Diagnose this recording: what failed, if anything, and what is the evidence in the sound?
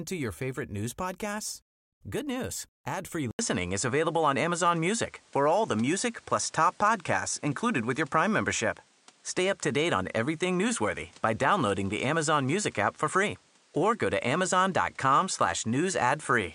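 Input switched to a poorer device at 3.31 s, after a gap of 80 ms, with the change lasting to the end. The failure sits at the driver or device-selection stage: the recording system most likely swapped to a different microphone mid-take. From the switch onward nothing reaches above 10.5 kHz, so the sound turns duller. A new background noise floor sits roughly 35 dB under the speech, and the level shifts by around 5 dB.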